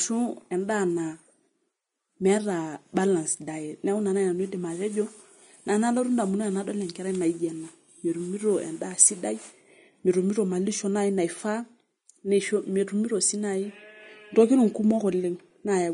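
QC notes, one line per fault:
Throughout, Vorbis compression, likely the cause: the speech has nothing above 10.6 kHz, and the treble that remains sounds hissy and grainy rather than crisp. The damage is plainly audible, with sibilants smeared into noise and consonant attacks blurred. At this quality the encoder cuts the top band and quantises the high residue so coarsely that fine detail turns into noise of roughly the same energy. That fits a low-rate stream around 32 kbps.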